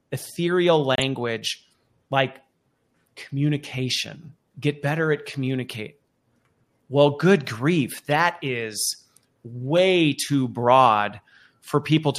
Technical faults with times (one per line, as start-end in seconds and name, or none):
0.95-1.04 corrupt frame decoded
8.11 corrupt frame decoded
9.77 corrupt frame decoded